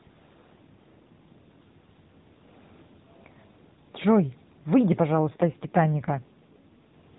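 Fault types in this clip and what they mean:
AMR rate drop: from 5.15 to 6.95 s the speech grows buzzier and more synthetic, which fits a codec step down from 12.2 to about 5.9 kbps. Unlike packet loss, nothing drops out, and unlike band limiting, the narrowband 4 kHz ceiling stays unchanged.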